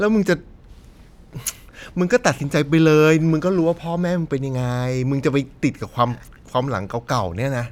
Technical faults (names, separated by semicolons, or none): none